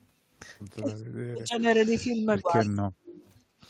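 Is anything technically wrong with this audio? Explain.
Yes, there are a few echo-canceller problems here. From 0.76 to 1.64 s and again from 1.87 to 3.18 s the talker dips hard, down by something like 40 dB at worst, and breaks into pieces. That's speech suppressed in double talk, likely the canceller ducking everything while the far end spoke over them.

Around 2.21 to 2.42 s there's a faint echo leak, a delayed copy of the voice sitting about 113 ms behind and very quiet, roughly 35 dB under the speech. The far end's canceller is likely letting some loudspeaker pickup slip back through.

Then from 3.47 to 3.6 s the room tone drops by about 12 dB for a brief moment before recovering. That's background gated by the echo canceller, which clamped the microphone down while the loudspeaker was active and then let go.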